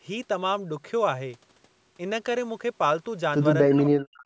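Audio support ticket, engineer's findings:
Speech dips and breaks up from 3.67 s to the end of the clip, about half a second in all, with the deepest drop roughly 40 dB. Likely cause: speech suppressed in double talk. The echo canceller, unable to separate near-end speech from loudspeaker echo during overlap, attenuated both. Call mic processing band-limits to 8 kHz, consistent with a 16 kHz wideband path.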